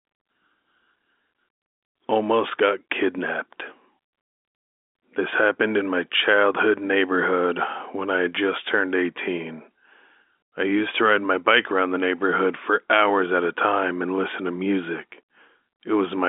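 Nothing is technically wrong with this speech clip.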